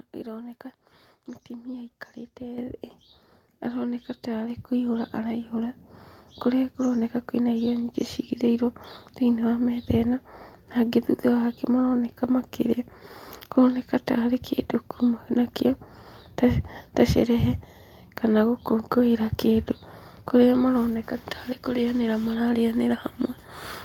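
At 2.58 s and again at 4.5 s the microphone volume stepped up, by about 8 dB then about 4 dB, as the input level was raised at the device. Unlike a talker moving closer, the background noise jumps instantly alongside the speech.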